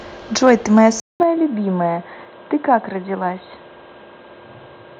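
Speech opens with a harsh, crackling edge on two loud moments, from 0.47 to 0.50 s and again from 0.77 to 0.80 s. Those peaks sit about 1 dB past the converter's limit, with a small share of samples flattened. This is microphone overload, likely from the input gain being set too high, so the tops of the waveform are sliced off at the converter's limit and the squared edges add that gritty distortion. At 1.0 s the sound drops out for 200 ms and then comes back dull and boxy for the rest of the clip. The band is narrower, a faint new noise floor sits well under the speech, and overall loudness stays roughly the same. That points to the input being switched to a poorer device, such as another microphone or a headset's call profile, whose narrower band and different character replace the original path mid-recording. At 1.23 s speech and background both fall abruptly by about 5 dB in a single step, soon after the clipped peaks. 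This is the microphone volume being stepped down, likely by call software reacting to the earlier overload and cutting the device's input gain in one move rather than easing it down.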